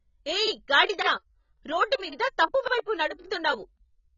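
From the start the speech sounds dull and smeared, with nothing above 7 kHz and heavy codec damage throughout. That's likely AAC compression, AAC-LC at a rate around 16 kbps, which drops the top band and starves the rest of bits.

Then there are overlapping chunks at 0.47, 1.02, 1.57, 2.12, 2.67, 3.22 and 3.77 s. Each new half-second chunk starts before the previous one has finished, so about 50 ms replays at every join, giving a regular stutter. The first comes just before "గాడిద రోడ్డు", and the one at 2.12 s falls between that and "తప్పు వైపు".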